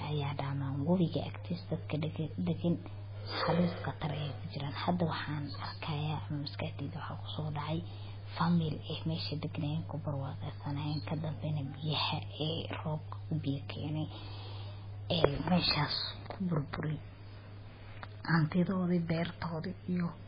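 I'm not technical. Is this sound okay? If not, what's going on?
No. The recording was most likely squeezed hard by MP3 compression, which saves space by throwing away parts of the sound it judges less important. Here it kept almost nothing, so the encoder cut off everything above about 5 kHz and let quieter details flicker in and out. From start to finish the speech sounds dull and muffled, with a watery, swirly quality, and crisp sounds like s's and sharp consonants come out smeared and metallic.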